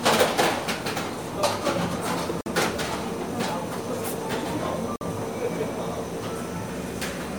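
A short recording of sound that's swirly, smeared and hollow all the way through, with blurred attacks and nothing above 20 kHz, which is likely generation loss from a few rounds of MP3 re-encoding at something like 96 kbit/s. There are also two gaps between chunks, 50 ms holes at 2.41 to 2.46 s and 4.96 to 5.01 s, spaced to fit 2.5 s chunks where silence got left at each join.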